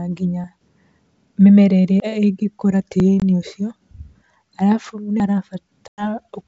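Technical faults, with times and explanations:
0.44, 2.0, 3.0, 3.76 and 5.2 s, dropped buffer (overrun): a jump with the speech skipping ahead by roughly 40 to 100 ms, no silent gap, likely from samples being overwritten before the program collected them.
3.20 s and 5.88–6.05 s, packet loss on an ADPCM call: hard-edged silent holes of 20 ms and 100 ms, which fits one and about five lost packets. Speech returns slightly distorted as the decoder's predictor resynchronises.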